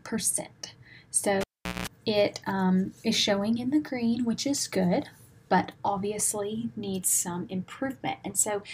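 At 1.41 s a live cable is pulled and plugged in. A pop drops the sound to near silence for 410 ms. Within that gap, 60 Hz mains buzz sounds for 190 ms while only the tip touches. A second pop at 1.87 s restores it.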